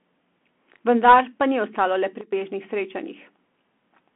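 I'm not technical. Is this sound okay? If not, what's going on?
No. The whole clip has gone through a Bluetooth CVSD headset codec, so the speech sounds thin and phone-like, with nothing above about 3.8 kHz, scratchy s sounds and a gritty hiss underneath. There's also a sudden gain jump from 2.21 to 2.33 s, where everything abruptly drops much quieter, likely from a volume change applied without any smoothing.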